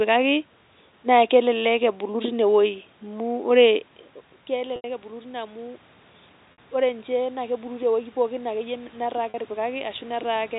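Three dropouts, at 4.76 to 4.84 s (80 ms), 6.52 to 6.58 s (60 ms) and 9.30 to 9.34 s (40 ms), show packet loss with pitch repetition. The receiver loops the last pitch period to fill each gap, so you get a brief held, buzzy tone that fades before the speech picks back up.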